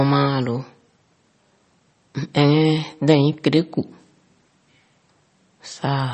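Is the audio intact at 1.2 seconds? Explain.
No. At 1.2 seconds, as throughout the clip, the speech is likely damaged by MP3 compression at a low bitrate, consistent with about 32 kbps. Nothing above 8.3 kHz remains, and weak frequency lines flicker between frames, giving a watery swirl that a plain low-pass filter would not.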